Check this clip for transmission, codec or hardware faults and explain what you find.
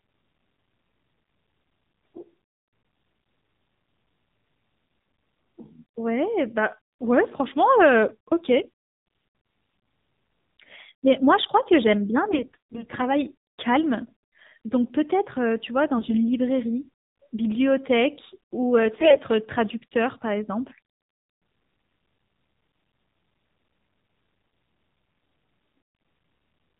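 Yes, two faults. The whole clip went through a narrowband mobile codec, and four short stretches carry corrupted codec frames.

AMR narrowband mobile codec, throughout: the speech was coded as AMR-NB at a low rate, which fits a mode around 7.4 kbps. Everything above 4 kHz is gone, and the sparse pulse excitation driving the vocal-tract model makes the voice plainly buzzy, muffled and synthetic.

AMR bit errors, at 2.15–2.20 s, 12.28–13.09 s, 15.98–16.13 s and 18.94–19.17 s: weakly protected bits in those frames arrived flipped, at rates from a few percent to well over ten. Misplaced excitation pulses and skewed gain and spectral values make the voice hoarse, scratchy and gargly while pitch and level hold.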